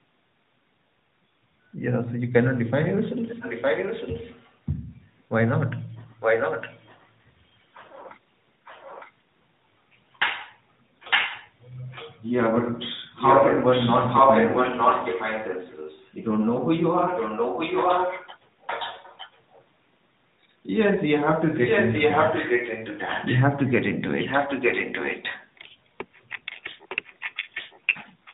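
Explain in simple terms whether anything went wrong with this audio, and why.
An echo leak repeats the speech about 0.9 s late at 2.89–5.11, 6.2–7.09, 8.65–9.12 (faintly), 11.1–12.21, 13.16–16.12, 17.07–19.64 and 21.66 s to the end. A loudspeaker's sound likely reached the far-end microphone and slipped past its echo canceller.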